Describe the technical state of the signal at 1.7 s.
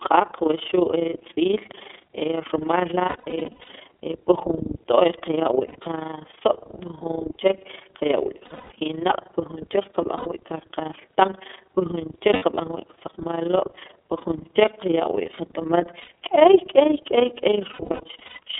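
At 1.7 s the speech carries overlap-add ripple, present through the whole clip. Frames were rejoined with an overlap that doesn't sum to a steady gain. The level dips by about 11 dB roughly 30 times a second, giving a fast flutter.

The same moment shows iLBC codec damage, also continuous. The line passes only about 250 Hz to 3.5 kHz, so the sound is thin and muffled. Each frame's excitation is coded separately, which fits 30 ms frames at 13.33 kbps. The result is a plainly rough, synthetic texture.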